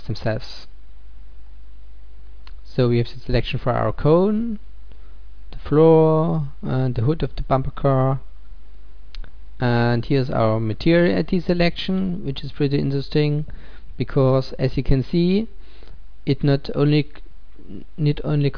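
Nothing here calls for comment, since there's no technical fault to point to anywhere in this audio.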